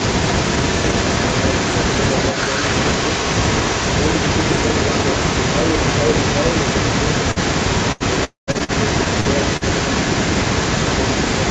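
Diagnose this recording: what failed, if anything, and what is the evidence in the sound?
A delayed second copy of the speech runs through the whole clip, trailing the direct sound by about 127 ms and only a little quieter than it. This is an echo leak at the call-processing stage, likely from the far end's loudspeaker reaching its microphone past an incomplete echo canceller.

Brief smears, each covering about 40 ms of lost audio, occur at 7.31 s, 8.51 s and 9.20 s. Each is short concealed packet loss on the network: the decoder bridged the missing audio by extending the preceding sound, then crossfaded back into received audio.

Longer held buzzes or fading hiss appear at 7.92 s, 8.64 s and 9.57 s, after which speech resumes with material skipped: about 80 ms at 7.92 s and about 40 ms at the other two. These are bursts of packet loss, concealed by extrapolating and then attenuating the last sound.

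From 8.24 s to 8.50 s the sound stretches into a fading buzz, then drops to silence before audio returns with roughly a quarter second missing. This is a long network dropout, likely a brief stall in delivery that outlasted the concealment.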